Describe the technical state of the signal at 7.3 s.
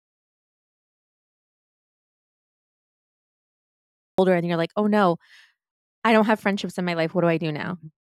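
At 7.3 s the speech signal is intact, with no audible technical fault at that moment.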